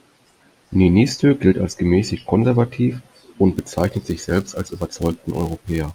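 At 3.57 s the speech picks up a filter restarted on every block: the filter drops its memory at each block boundary, so every 5 ms starts with a little transient. That stacks into a 200 Hz buzz that tracks the level through to the end.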